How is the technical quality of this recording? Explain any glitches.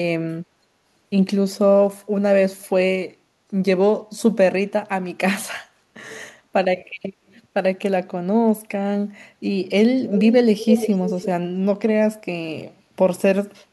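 Echo leak is the one fault, heard at 10.09 to 10.35 s, 10.58 to 11.27 s and briefly at 13.6 s. A delayed copy of the speech trails the original by about 345 ms each time. In the first stretch it sits well below the speech, in the second it is nearly as loud, and at 13.6 s it is barely audible. The likely cause is a far-end loudspeaker whose echo canceller let part of the microphone pickup back into the call.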